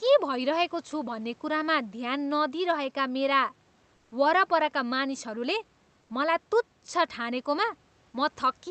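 Speech, carried over a call path whose audio stops near 8 kHz, with comfort noise in place of the background at 3.95–4.11 s and 6.01–6.09 s. In those gaps the real room noise, about 41 dB below the loudest speech, turns into a flat, featureless hiss about 2 dB quieter. This is likely Opus discontinuous transmission. Unlike a dropout or noise gate, the pause never goes silent: a synthetic noise bed stays, and only the room's texture vanishes.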